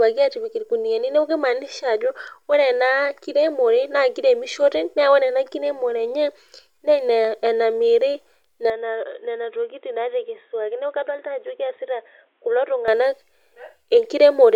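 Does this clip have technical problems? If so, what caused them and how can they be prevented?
Yes. The input was likely switched to a poorer device from 8.70 to 12.88 s, one passing nothing above 3.8 kHz. The speech turns dull and boxy, drops a few decibels, and picks up a faint new background noise, with no gap at either switch. To prevent it, lock the recording software to one input device and disable automatic switching, such as a headset's call profile.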